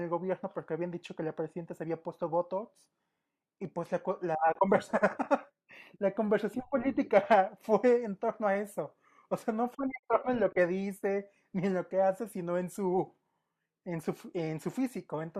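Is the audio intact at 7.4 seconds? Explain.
Yes, at 7.4 seconds the speech runs through cleanly, with no dropout, click, distortion or other fault heard at that moment.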